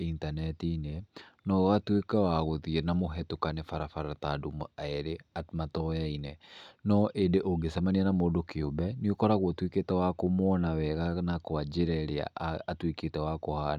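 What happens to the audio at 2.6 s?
At 2.6 s the speech continues cleanly, with no dropout, click, distortion or other fault at that moment.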